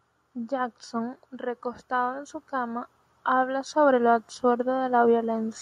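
A short speech recording with automatic gain rising across nearly the whole thing. From about 0.48 s to 5.57 s the level creeps up steadily, roughly 9 dB in total, and the voice and the background noise swell together rather than the voice alone getting louder. That's the gain control deciding the input was too quiet and slowly winding its gain up, lifting everything it hears, room noise included, over those five seconds.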